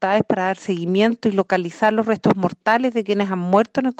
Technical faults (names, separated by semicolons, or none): sample clock jitter